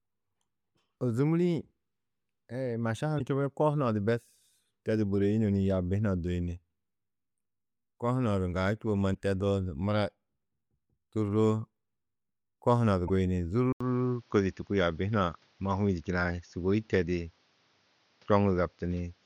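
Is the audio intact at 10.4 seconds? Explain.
Yes, at 10.4 seconds the audio runs cleanly, with no dropout, click, distortion or other fault at that moment.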